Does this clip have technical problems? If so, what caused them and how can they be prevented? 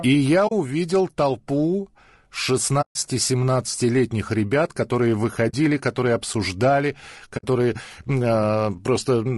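Yes. Low-delay AAC compression runs through the whole clip: the speech sounds rough and grainy, with noise filling the gaps between harmonics. The likely cause is AAC-ELD's short frames, which resolve pitch poorly, at a rate that fits about 32 kbps. Raising the bitrate would prevent this.

AAC frame loss with muting cuts soft-edged holes at 0.47 s, 2.81 s, 5.49 s and 7.37 s, lasting 40, 140, 40 and 60 ms. The decoder zeroed the missing frames, so the overlapping windows faded the sound out and back in. Loss concealment or a more reliable network path would prevent these gaps.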